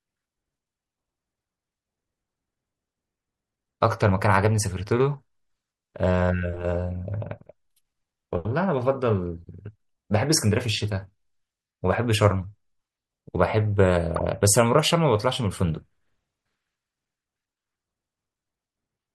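A corrupt frame decoded at 14.15 to 14.21 s in this speech clip produces a brief glitch peaking around -15 dBFS, as damaged compressed data across a few frames misplaces energy across frequencies.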